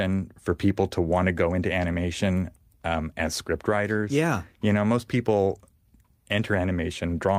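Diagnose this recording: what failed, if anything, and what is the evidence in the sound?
Nothing in the speech signal points to a failure at any stage of the chain, since no dropouts, level jumps, distortion, timing disruptions or channel problems can be heard anywhere in the recording.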